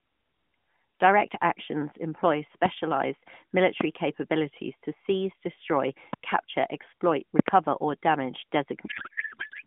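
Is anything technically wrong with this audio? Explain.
Yes. There are two problems: a series of loud pops and a codec payload misread at the end.

Loud pops occur at 2.66–2.68 s, just after "actions employ", then at 3.81–3.83 s and 6.13–6.16 s. A double pop spans 7.39–7.50 s, between "seize destroy capture exploit" and "or damage". Each is a sharp click roughly 20 dB above the speech, and the double is somewhat louder. The speech continues underneath. The likely cause is a voltage spike from a connector, switch or static.

The codec payload misread starts at 8.86 s, right after "or damage", and lasts to the end. The speech turns into garbled, warbling noise that barely tracks it. The decoder is reading its bit fields from the wrong positions. This fits octet-aligned AMR frames being unpacked as bandwidth-efficient ones. Before this point, the narrowband AMR sound is band-limited to roughly 150 Hz–3.5 kHz.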